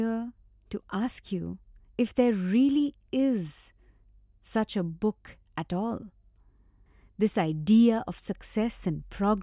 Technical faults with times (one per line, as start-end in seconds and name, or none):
none